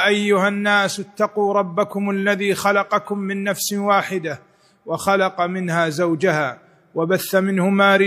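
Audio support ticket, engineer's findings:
No audible technical faults found in the signal: level, continuity and timing hold steady throughout the clip, with nothing pointing to a failing component.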